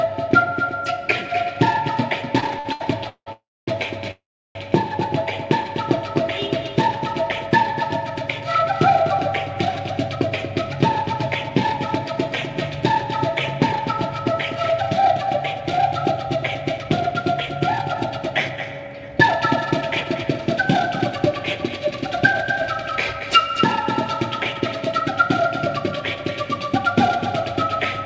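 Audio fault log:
2.40–3.28 s, repeated stalls (stutter): the sound halts six times, with 343 ms filled in total and the longest gap 173 ms. Each stall carries the last sound forward while the jitter buffer is empty, so nothing is lost, but the passage drags and stutters.
3.32–3.69 s and 4.11–4.57 s, call audio freeze: the sound holds as a fading continuation and then drops to silence, for 348 ms with 250 ms silent, then 440 ms with 350 ms silent. The likely cause is packets held up in transit that emptied the jitter buffer. Playback resumes where it stopped, inserting a gap without losing content.
9.90–11.78 s, 14.51–19.10 s and 19.81–26.16 s, jitter buffer speed-up: the sound runs faster at unchanged pitch, at 105%, 106% and 104%, so it sounds slightly hurried. The receiver trimmed many pitch-period-length pieces to shrink an overfull buffer, removing about a tenth of a second in the first stretch and about a third of a second in each later one. 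All of this is carried over G.722 at 64 kbps, with nothing above 8 kHz.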